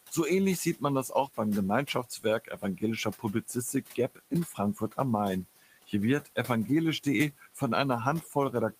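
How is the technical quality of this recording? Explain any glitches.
Noise suppressor artifacts and speech cut by the noise suppressor are the main problems here. Both come from the same processing stage acting on room noise that sits about 18 dB below the speech.

Noise suppressor artifacts run throughout the clip. The suppressor estimates which frequency bands hold steady background noise and pulls them down frame by frame, by about 14 dB. The room noise therefore sinks in the gaps and swells back under the speech.

Speech cut by the noise suppressor occurs at 0.65–1.38 s, 1.86–4.98 s, 5.7–5.93 s, 7.38–7.61 s and 8.21–8.36 s. In these spots the suppressor mistook low-level parts of the speech for noise and turned them down with the background, by as much as about 16 dB (about 10 dB at 8.21 s). Only fragments are hit, roughly a second in total in the long middle stretch and about 0.1 to 0.15 s in each of the others. 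Soft consonants and word endings there sound swallowed or fade out.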